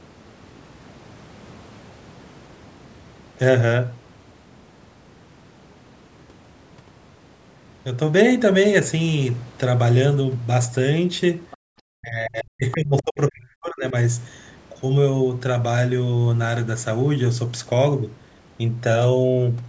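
A speech recording in which a faint second voice, the other side's voice leaking through, surfaces briefly at 11.51 to 11.57 s and again at 12.98 to 13.02 s, sitting roughly 20 to 25 dB under the talker. It is likely residual loudspeaker echo that the canceller failed to remove. Unlike a suppression fault, something extra is added here rather than taken away. From 11.86 to 13.94 s the talker's own speech is suppressed in double talk: it dips sharply, at worst by around 40 dB, and breaks up for about two seconds while the far side is also active. The likely cause is the canceller ducking everything when it cannot separate the two voices. Unlike a dropout, the gaps follow the overlap rather than landing at random, and the content above 8 kHz is absent throughout, consistent with the call's microphone processing.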